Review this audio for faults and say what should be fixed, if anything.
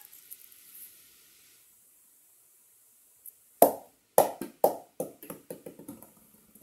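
Nothing needs fixing, as the signal stays steady and intact throughout with no technical faults to report.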